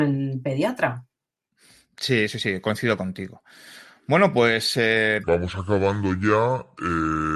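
From 5.24 s, right after "pues eh", there's a wrong sample rate fault: audio recorded at 44.1 kHz plays at 32 kHz, so the speech drags to about 0.73 speed and drops roughly 5.5 semitones.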